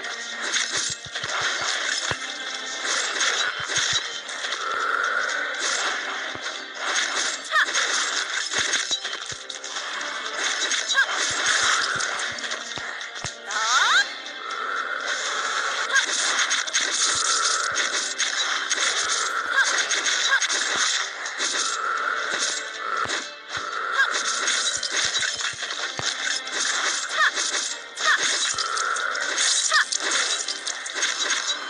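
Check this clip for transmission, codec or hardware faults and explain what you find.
Nothing stood out as a problem on listening.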